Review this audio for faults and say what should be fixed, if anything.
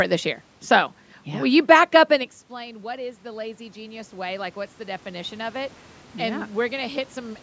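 Automatic gain rising, from 2.12 s to 7.38 s. Around 2 s the talker moves away from the microphone, and the level reaching it falls by about 19 dB. The automatic gain control treats this as a quiet input and raises its gain gradually, by about 11 dB over roughly five seconds. The voice and the room noise behind it therefore swell up together, and only part of the drop is made back. Keeping the talker at a steady distance from the microphone, or fixing the gain instead of letting it adapt slowly, would prevent this.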